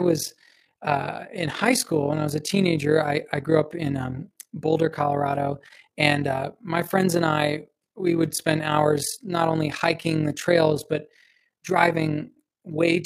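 From start to finish the speech carries overlap-add ripple: the level pumps by about 11 dB at a rate of roughly 40 times a second, because reassembled frames overlap with uneven gain. It sounds like a fast, robotic flutter, steadier and more regular than random dropouts.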